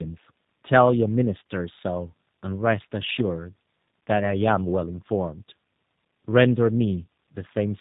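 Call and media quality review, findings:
Tandem speech coding, whole clip: rough, muffled, warbly speech, nothing above 3.8 kHz. Sounds like two speech codecs back to back, likely an AMR-NB leg re-encoded to G.729A at 8 kbit/s via G.711. The second coder mangles the first one's artefacts, so they pile up.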